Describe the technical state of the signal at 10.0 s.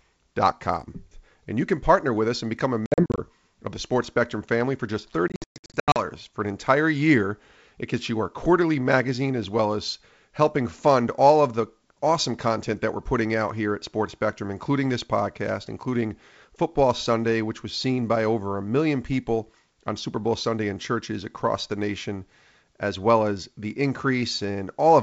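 At 10.0 s the speech is intact, carried cleanly through G.722 wideband coding at 64 kbit/s with no fault present at that moment.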